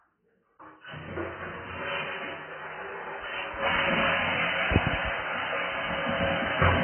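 Throughout, nothing survives above 3.1 kHz, and the sound warbles and smears, likely heavy AAC compression near 12 kbps rather than a clean low-pass filter.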